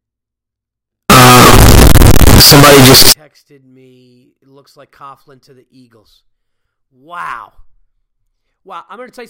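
From 1.10 to 3.12 s the speech turns into very loud, harsh distortion. This is likely signed and unsigned mixed up on 16-bit samples, so every zero crossing jumps full scale.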